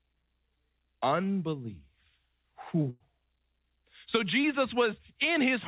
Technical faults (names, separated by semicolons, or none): burst of packet loss; short concealed packet loss